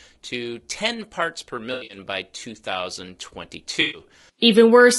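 From the start, the speech has a rough, grainy texture, with noise filling the gaps between pitch harmonics and a thin, somewhat synthetic top band. That is the signature of low-delay AAC compression, likely AAC-ELD. Its short frames resolve harmonics poorly, and the damage level fits a bitrate around 32 kbps, too few bits to code the voice cleanly.

Right after "parts per", from 1.73 to 1.97 s, there is AAC frame loss with concealment. About 140 ms of audio is missing in scattered gaps across roughly 160 ms, with the longest single gap around 70 ms, which points to seven lost 20 ms frames. The decoder fills each gap from the last good spectrum, so this stretch sounds smeared, noisy and phasey. A second loss from 3.81 to 4.01 s drops about 120 ms and produces the same smeared, noisy patch.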